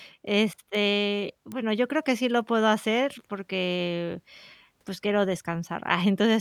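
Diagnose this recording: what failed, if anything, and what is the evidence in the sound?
A bit error spike struck twice in the digital path, on a link or in storage. A sharp tick lands at 0.75 s at about -23 dBFS, and a louder one at 1.52 s, about -17 dBFS, just before "yo creo que sí". A single flipped bit throws one or two samples off by a power of two before they snap back. The waveform shows an isolated needle, and the spectrogram shows a thin vertical line across all frequencies.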